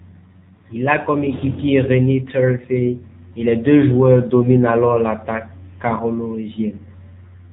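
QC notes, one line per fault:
throughout: AMR narrowband mobile codec. The speech is cut off above 4 kHz and has a buzzy, synthetic edge, with plainly audible damage. The band limit points to 8 kHz sampling, and the coarse vocal-tract model and sparse pulse excitation fit a low mode of about 7.4 kbps.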